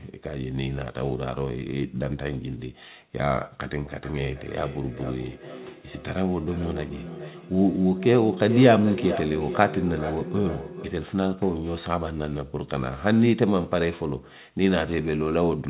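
From 3.88 s to 11.12 s there's feedback echo between two devices. A second device in the room replays the call, its mic catches it, and neither canceller removes it. The speech comes back roughly every 0.4 s, thin and ringy, peaking about 9 dB below the talker.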